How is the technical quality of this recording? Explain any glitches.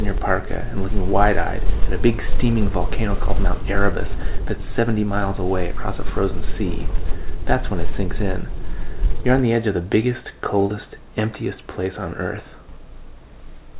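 No glitches can be heard anywhere in the recording. It has the narrow telephone-band sound of a G.711 mu-law call path, with nothing above 4 kHz.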